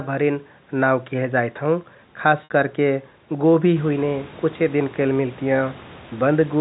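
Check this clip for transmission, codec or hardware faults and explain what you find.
One transmission fault shows up in this speech clip: a short packet loss with pitch repetition at 2.44–2.50 s, just before "करके गोभि हुइने कुछे". About 60 ms of audio failed to arrive, a gap that fits three 20 ms packets. The receiver filled it by looping the last pitch period and fading that loop over roughly 50 ms. The result is a brief buzzy hold on the sound that dies away almost to silence before the speech cross-fades back in.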